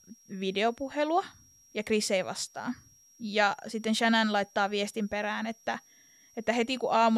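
A thin, steady whistle sits high above the speech for the whole clip, drifting slightly between 5.6 and 5.7 kHz, roughly 30 dB below the speech. This is switching supply whistle: a switching power supply running in an audible burst mode or beating with another one.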